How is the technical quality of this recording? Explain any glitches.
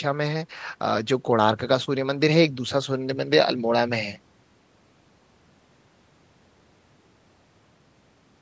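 No glitches can be heard: the speech has gone through a call's microphone processing, which trims away the lowest bass and leaves nothing above 8 kHz, and that band limit is simply how such a path works rather than a fault.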